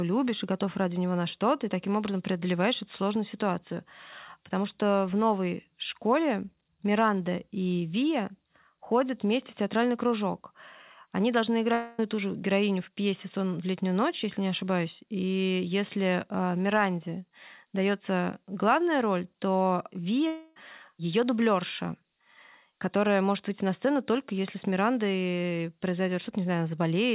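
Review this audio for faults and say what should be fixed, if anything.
At 11.73–11.99 s and 20.27–20.57 s, the speech turns into a fading buzzy smear lasting over a quarter second. This is likely a long network dropout, with the lost audio filled in by the receiver. To prevent it, use a more stable network link, or add forward error correction or packet redundancy to the call.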